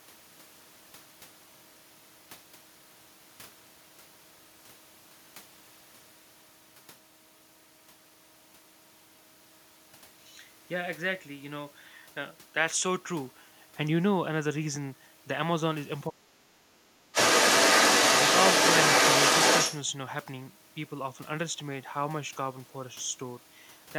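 From 16.08 to 17.16 s, an echo canceller that likely could not tell the talker apart from loudspeaker echo while both sides spoke turned everything down. This is speech suppressed in double talk: for about a second the voice dips, falling by roughly 30 dB at its deepest.

From 17.13 to 19.8 s, the canceller likely failed to remove the loudspeaker playback from the microphone, so the other side's voice is leaking through. That second voice is clearly audible, sitting roughly 5 dB above the talker's level.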